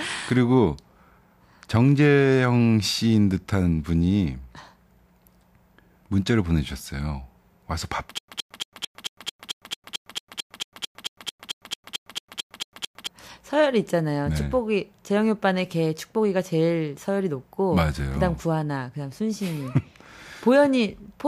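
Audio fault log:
8.18–13.07 s stutter with silent gaps. A short burst of about 119 ms repeats 22 times, each followed by roughly 104 ms of digital silence, giving a steady 222 ms cycle. This likely comes from a stalled stream replaying its last fragment. The audio that should have played here is lost.
18.38–19.97 s channel delay (comb filtering). One channel runs about a sample late, a tiny fraction of a millisecond. When both channels are summed, shared content cancels at evenly spaced frequencies, with the first notch up near 20 kHz. The very top end sounds slightly dulled.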